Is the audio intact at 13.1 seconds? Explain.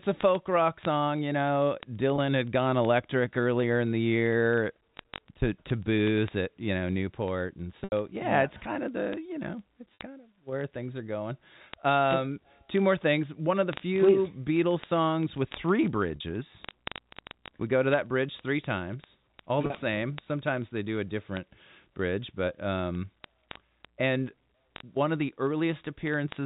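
No. A digital link was being read by a receiver running on its own clock, roughly a thousand parts per million off the sender's. These word clock ticks run from 0.10 to 26.45 s, slipping one sample about every 20 ms, and sound like a steady buzz of sharp ticks of uneven strength through 13.1 s, over the narrow telephone band of the G.711 coding.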